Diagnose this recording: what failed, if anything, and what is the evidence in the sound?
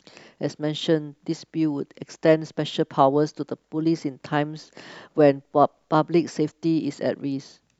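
Nothing failed: no audible defect in the speech at any stage from capture to playback.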